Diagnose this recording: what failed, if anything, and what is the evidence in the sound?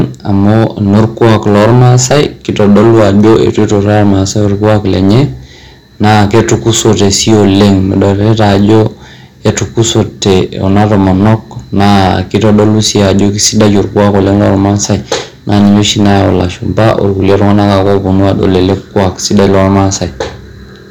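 Hard clipping throughout the speech, at the converter or gain stage. About 14 dB of overdrive flattens roughly a tenth of the samples, adding harsh fuzz on loud syllables.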